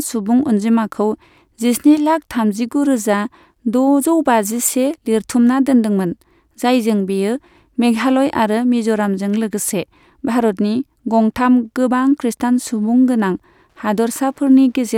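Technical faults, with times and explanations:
11.64 to 14.98 s, Wi-Fi interference: from here to the end, a steady ticking creeps in under the speech, about ten ticks a second. That rate is the giveaway. A Wi-Fi radio sitting near the audio circuit sends a beacon every 102.4 ms, and the circuit picks up and rectifies each burst, so every beacon lands as a little click. It's faint, roughly 45 dB below the speech.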